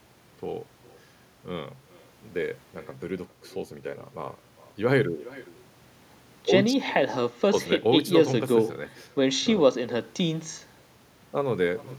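Throughout the speech, an echo with no canceller returns each phrase roughly 0.4 s later at about 22 dB down, thin, because the far end's loudspeaker feeds its microphone unchecked. A spectrogram shows faint, delayed duplicates trailing every syllable, filling the gaps.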